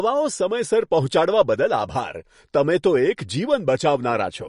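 Throughout the speech, nothing sounds above 10.6 kHz, and the sound turns watery and swirly. This is likely MP3 compression at a low bitrate, around 40 kbps.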